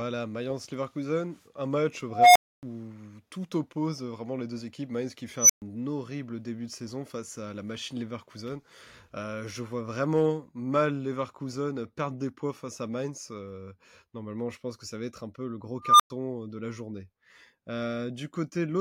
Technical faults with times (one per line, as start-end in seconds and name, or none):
2.10-2.63 unstable filter
5.37-5.62 unstable filter
15.82-16.10 unstable filter